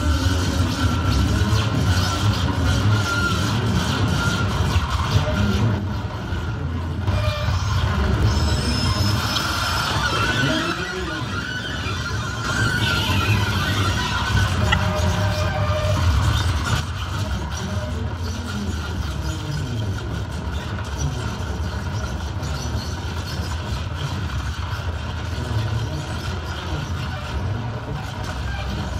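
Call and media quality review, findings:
One channel drops out, 5.79–7.07 s and 10.72–12.44 s, then again from 16.80 s to the end at 29 s. Level steps down about 6 dB abruptly each time. Likely a stereo capture or transport path losing one leg, so the mono downmix only gets half its input.

Corrupt frame decoded at 9.36 s and 14.72–14.74 s. Short glitches, the first fairly soft, the second much louder. Codec side: damaged bits in a couple of frames each time got decoded anyway, with misread gains throwing energy into the wrong bands.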